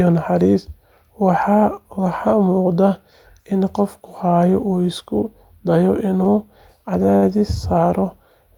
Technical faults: short stall from a late packet

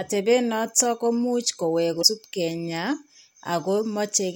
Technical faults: damaged data in a compressed stream

